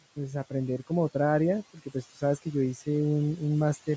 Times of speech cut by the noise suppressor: 1.74-2.23

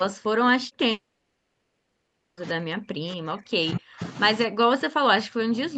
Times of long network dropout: 0.91-2.39

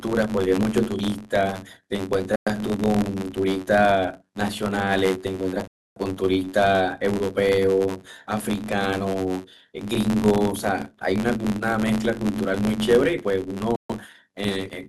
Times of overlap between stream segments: none

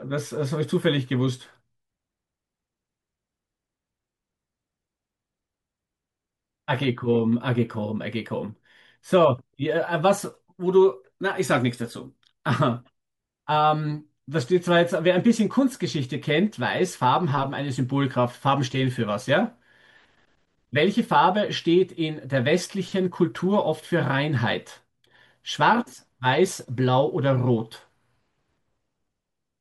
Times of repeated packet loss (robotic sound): none

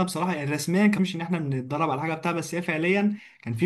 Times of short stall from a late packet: none

